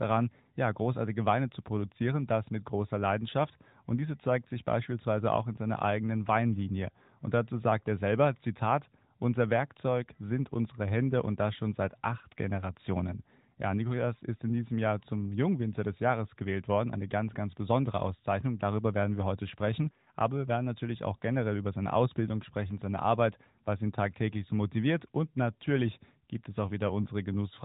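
No technical faults are audible anywhere in the speech.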